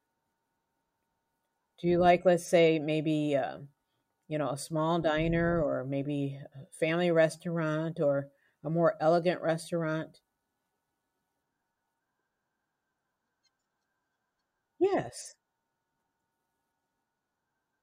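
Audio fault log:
No faults detected in this speech recording.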